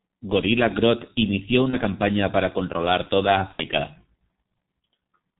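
The whole clip carries G.723.1 codec damage at 6.3 kbit/s. The speech is muffled and hoarse, with nothing above 4 kHz and smeared consonants, which comes from the narrow band and the slowly updated voice model.

VoIP packet loss concealed by the speech codec follows at 1.70–1.77 s, just before "campaña para controlar toda". A second instance comes at 3.53–3.65 s, right after "campaña para controlar toda". The gaps, of about 30 ms and 60 ms, fit one and two lost 30 ms frames. The decoder stretches the last sound out and lets it fade instead of leaving silence or a click.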